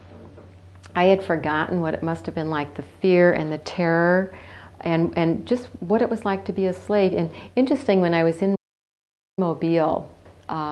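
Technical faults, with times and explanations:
8.55–9.39 s, playback stall: the sound drops to silence for 0.82 s before resuming, likely because the player ran out of data or was blocked.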